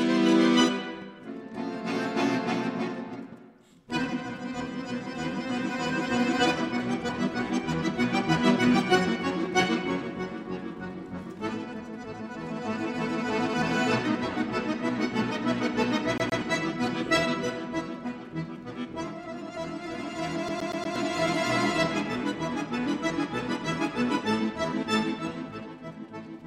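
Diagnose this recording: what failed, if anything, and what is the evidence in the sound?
A fast, even stutter appears twice. From 16.18 to 16.41 s, a 118 ms fragment of sound plays twice, and from 20.49 to 20.96 s the same-length fragment plays four times. Each repeat is clipped off by a brief mute before it starts again. This is a CD stuck on one turn, a playback fault. A scratch throws the laser back one track at the same spot on each revolution, so one rotation's worth of audio repeats until the pickup escapes.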